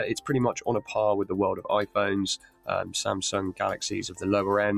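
A noise suppressor applied to music or sounds runs across the whole clip. A processor tuned for speech keeps treating sustained parts of the sound as noise, so the level swings by roughly 10 dB, and held tones and tails dip while attacks pass.

Sound cut by the noise suppressor occurs at 2.37 to 2.94 s, where about 400 ms of sustained material sinks by as much as about 17 dB, and again at 4.08 to 4.23 s, dropping about 13 dB.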